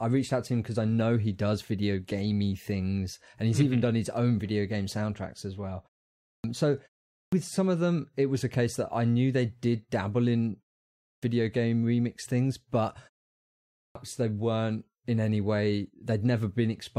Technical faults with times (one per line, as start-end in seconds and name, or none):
6.20-6.44 clipped start after a pause
7.10-7.32 clipped start after a pause
10.99-11.23 clipped start after a pause
13.72-13.95 clipped start after a pause